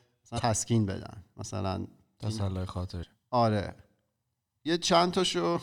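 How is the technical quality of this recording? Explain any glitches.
The recording has two brief glitches. Damaged data in a compressed stream at 0.35–0.40 s and 2.99–3.04 s: corrupted bytes make the decoder misread frames and lose sync until the next header, giving a short chirp, squawk, click or hole.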